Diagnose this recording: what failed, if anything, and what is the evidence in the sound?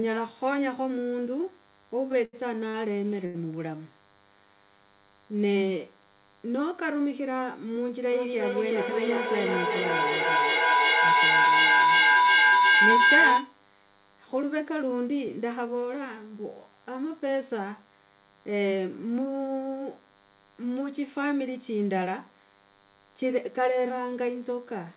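A steady DECT cordless phone buzz runs under the whole recording, a problem in the analogue wiring or input stage. A nearby DECT handset or base transmits a burst every 10 ms, and the audio circuitry rectifies it into a thin 100 Hz buzz sitting roughly 30 dB below the speech. On a spectrogram it appears as a comb of evenly spaced horizontal lines at 100 Hz and its harmonics, continuous through pauses. The waveform shows a small periodic ripple in the silences.

Repeated stalls (stutter) between 2.12 and 3.37 s come from the buffer stage. Packets arrived too slowly, the jitter buffer ran dry four times, and the receiver stretched the last sound to cover each gap. That filled 215 ms, about 17% of the span, with the longest hold at 79 ms. Nothing is lost, but the speech drags and catches. A spectrogram shows smeared, frozen harmonic bands at each stall. The waveform shows repeated, fading copies of one cycle.

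A feedback howl from 8.12 to 13.6 s is an acoustic loop. Two devices in the same room joined the call, so the microphone picked up the loudspeaker and each round trip added gain. The repeats narrow toward about 1.5 kHz and build with repeats roughly 400 ms apart, peaking about 8 dB above the speech. On a spectrogram it is a bright horizontal line that thickens in steps. The waveform envelope balloons toward the peak.

Two jitter buffer speed-up events, at 17.13 to 18.14 s (108% speed, roughly 100 ms removed) and at 23.90 to 24.36 s (107%, about 40 ms), are buffer behaviour. With more audio held in the buffer than it aims for, the receiver trimmed pitch-period slices to bring the delay back down. Pitch stays unchanged while the speech sounds hurried. A spectrogram shows compressed syllable spacing with harmonic lines at normal heights, alongside the G.711 path's 4 kHz ceiling.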